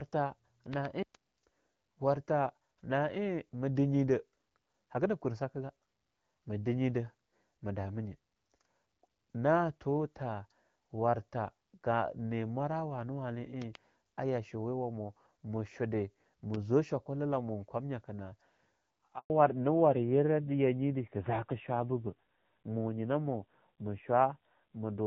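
At 0.74 to 0.87 s, two loud pops land in quick succession. They peak at roughly 10 dB above the speech, which carries on beneath them. A sudden voltage pulse, likely from a plug, switch or static discharge, was added to the signal. The same double loud pop returns at 13.62 to 13.77 s, just before "a yashoya wamu mu", again near 10 dB. At 16.54 to 16.56 s a single louder pop peaks at about 15 dB. It falls between "yashoya wamu mu shude" and "zwa shokula".

At 19.18 s there is a handover gap. The call switched networks, and no speech frames arrived during the change. The voice dies away quickly and stays silent for 120 ms. Whatever was said in that window is gone.

From 19.30 s to the end comes a fallback to narrowband. Before this point, the wideband HD Voice sound fits AMR-WB at 12.65 kbit/s, with only light codec colouring. After the gap, nothing above 4 kHz remains. The sibilants lose their air, and the voice turns duller and rougher. 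This fits a drop to the older AMR-NB codec at around 7.4 kbit/s.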